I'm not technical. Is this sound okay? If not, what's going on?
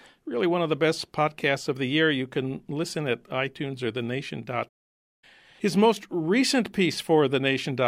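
No. There is a playback stall from 4.68 to 5.24 s: the speech suddenly drops to silence for just over half a second, then carries on. The likely cause is that the player briefly ran short of audio to play, or was held up doing something else, so nothing reached the speakers until it caught up. It's a hiccup in delivery, not a flaw in the recording itself.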